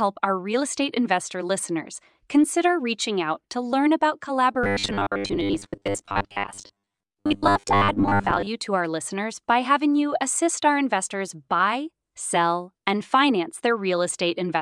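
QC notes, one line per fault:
4.64–8.48 s, robotic sound from repeated short buffers: new audio likely arrived too seldom, so playback looped a roughly 10 ms slice for most of this stretch. The repeats left a rigid, metallic 100 Hz buzz from "out to learn about" until "to our listeners by".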